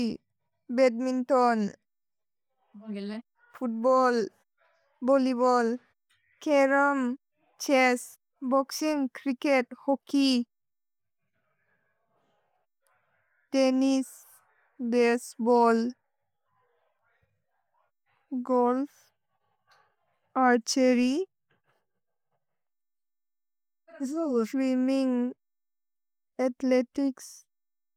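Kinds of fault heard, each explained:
Nothing stood out as a technical problem on listening to this speech recording.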